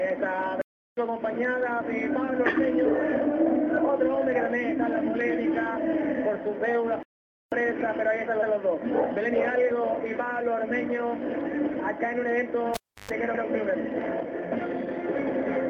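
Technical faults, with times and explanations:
0.62–0.97 s and 7.03–7.52 s, playback stall: The sound stops mid-flow for 0.36 s and then 0.49 s, then carries on. The likely cause is the player running out of data or its thread being blocked, leaving the output silent until it recovered.
8.41–8.53 s and 13.33–13.43 s, repeated frames: A 120 ms block, then a 96 ms block, plays a second time, heard as a stutter. That fits a run of compressed frames being written or sent twice, which the decoder played again. Together they add 216 ms.
12.74–13.11 s, cable pulled and plugged in: A pop, then near silence for about 0.32 s, including a 0.12 s burst of 50 Hz mains buzz, then another pop as the sound returns. A live cable was pulled out and pushed back in, with the buzz coming from the tip touching first.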